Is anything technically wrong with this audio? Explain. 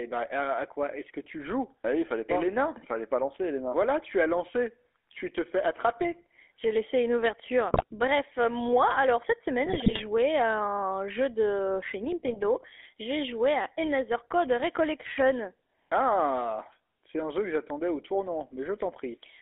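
Yes, two faults are audible.

GSM full-rate codec, throughout: the speech is rebuilt from a vocal-tract model driven by sparse pulses, giving a buzzy, gravelly roughness, with nothing passed beyond 300 Hz to 3.5 kHz.

GSM bit errors, at 7.74–7.84 s after "laissé une ouverture", 9.66–10.02 s after "cette semaine", and 12.26–12.61 s after "un jeu de chez": corrupted decoder parameters distort spectrum and level, producing squawks, pops and gargling.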